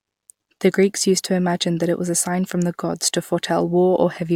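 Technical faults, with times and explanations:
Nothing in this bit of speech catches the ear as a technical problem, so there's nothing to list here.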